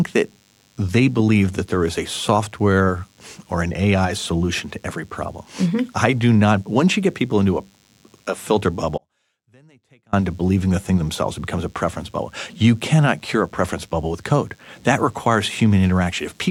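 Throughout the speech runs a DECT cordless phone buzz, a thin 100 Hz tone from rectified radio bursts, roughly 40 dB down, showing as evenly spaced harmonic lines on a spectrogram. From 8.98 to 10.13 s comes an audio dropout to a faint residue, likely a lost signal feed: the waveform collapses abruptly to a sliver around 35 dB lower, leaving only faint sound.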